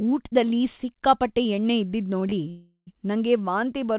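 A speech recording carried over a call path, with nothing above 4 kHz, which fits G.711-style telephone coding. Right after "ಊಟ್ದಲ್ಲಿ ಸಿಕ್ಕಾಪಟ್ಟೆ ಎಣ್ಣೆ" come two short stalls from a late packet, at 2.20–2.24 s and 2.30–2.34 s. Each holds the current sound for about 16 and 20 ms before speech resumes intact. On a spectrogram these show as brief frozen horizontal smears. The waveform shows a repeated cycle. A call audio freeze follows from 2.50 to 2.89 s, likely caused by packets held up until the jitter buffer ran dry. The last sound is stretched into a fading tone that ends in about 90 ms of silence. The spectrogram shows flat, decaying bands and then a blank strip. The waveform shows a shrinking repetitive envelope and then a flat line. Speech then picks up exactly where it stopped, so about 370 ms of delay is inserted and nothing is lost.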